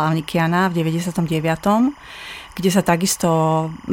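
Linear timecode running at 25 frames per second has leaked into the speech path from a neighbouring track or cable. This is timecode bleed, present throughout. Its square wave flips between tones near 1 and 2 kHz, leaving a steady chirping warble well below the speech.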